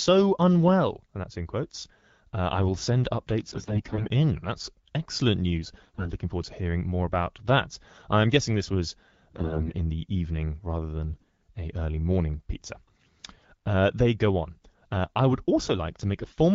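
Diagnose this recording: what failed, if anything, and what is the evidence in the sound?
AMR bit errors at 3.47–4.09, 5.83–6.11 (after "excellent news"), 9.30–9.74, 11.10–11.25 and 16.22–16.34 s, a network fault on the radio link. Corrupted weakly protected bits in the 12.65 kbit/s AMR-WB frames misplace excitation pulses and skew gain and spectral values, so speech turns hoarse and gargly.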